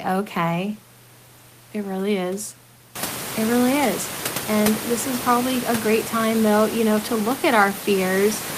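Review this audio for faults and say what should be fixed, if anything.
Nothing needs to be fixed in this audio, as it has no faults.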